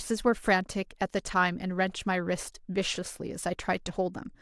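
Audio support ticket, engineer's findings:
Engineer's findings: no audio fault found in the speech clip on this ticket.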